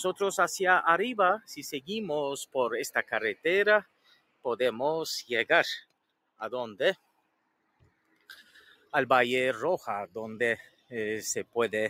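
From start to end, a noise suppressor applied to music or sounds is working on material it was not designed for. It treats steady, sustained content as background noise and pulls its level down, while onsets pass through, so the gain swings by roughly 15 dB over the clip. The result is an audible pumping: transients stay forward while the body and tails behind them thin out and flutter.

Four passages show sound cut by the noise suppressor, at 3.82 to 4.45 s, 5.82 to 6.41 s, 6.96 to 8.93 s and 10.62 to 10.92 s. In the first three, the held or decaying parts drop by about 21 dB, and in the last by about 17 dB. The long stretch near 7 to 9 s lasts about two seconds. There the sustained sound sinks in level and its decay is chopped short.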